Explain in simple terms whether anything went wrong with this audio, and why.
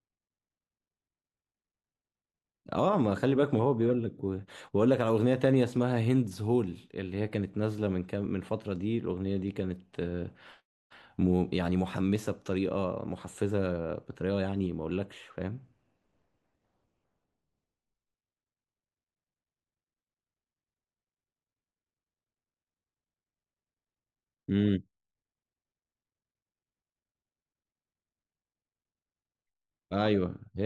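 Nothing went wrong here.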